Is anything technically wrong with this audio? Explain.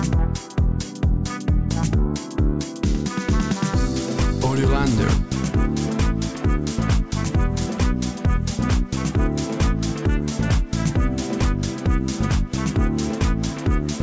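No, nothing stood out as technically wrong on listening to this audio.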